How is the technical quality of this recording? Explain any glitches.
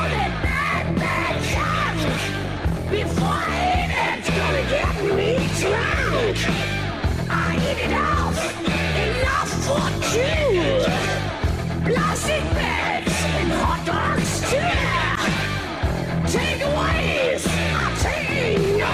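Nothing stood out on listening; I heard no glitches anywhere in the recording.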